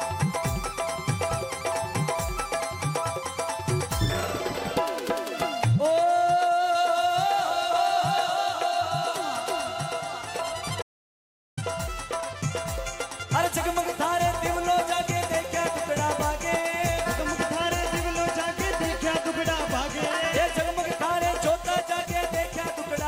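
At 10.82 s the sound cuts to silence for 0.75 s, until 11.57 s. This audio dropout to silence likely reflects a lost input link.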